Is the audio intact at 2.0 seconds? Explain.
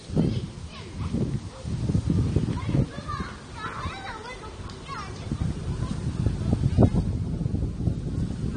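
No, at 2.0 seconds the sound has the dull, warbling, fizzy texture of likely AAC compression, present throughout and consistent with about 32 kbps AAC-LC. The coarse spectral quantisation leaves gaps in the spectrum, which distinguishes it from a simple low-pass filter.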